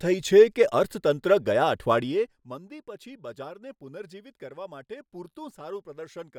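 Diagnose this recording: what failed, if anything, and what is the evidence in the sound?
Ticking over the speech from 1.96 to 2.45 s is zipper noise: the gain drops about 15 dB in unsmoothed per-buffer steps of about 1 dB, roughly fifty per second.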